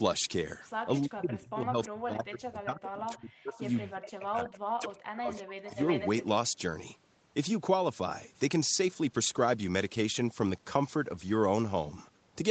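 From 1.06 to 3.64 s the speech dips and breaks up in pieces, dropping by up to about 40 dB for roughly two seconds in total. This is speech suppressed in double talk. The likely cause is an echo canceller that mistook the talker for loudspeaker echo while both sides spoke.

Inside and just after that stretch, faint delayed copies of the speech appear at 2.83 to 2.88 s, 3.12 to 3.16 s and 3.53 to 3.90 s. They arrive 374 ms late and sit about 20 to 25 dB below the speech. This is echo leak, likely from a loudspeaker's sound getting past the far side's echo canceller.

From 3.94 to 5.78 s the speech is suppressed again, cut by up to about 40 dB for roughly one and a half seconds. The sound drops and chops in the same way as before.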